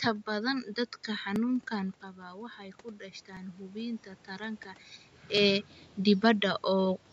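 The audio was cut into 2.0-second chunks that overlap, so each new chunk replays the last 7 ms or so of the previous one. Right after "badan dadka", at 1.36 s, this doubling is heard as a click or stutter. The same overlapping-chunks join returns at 3.37 s and 5.37 s, keeping the steady two-second rhythm.

Between 1.78 s and 4.56 s, automatic gain control reacts to an input that has dropped by about 11 dB and slowly raises its gain by about 6 dB. Speech and room noise swell together over those seconds rather than jumping. The talker moving around 2 s and 5 s also shifts the level.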